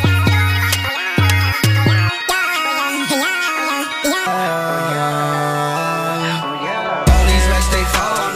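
From the start to 4.27 s, a section at the wrong speed: the audio was likely played back against the wrong clock, running 1.91 times faster than it was captured. Because speed and pitch are tied together, everything in that stretch is squeezed in time and lifted by roughly ten semitones, close to an octave, so the sound comes across thin, high and hurried until the section ends at 4.27 s.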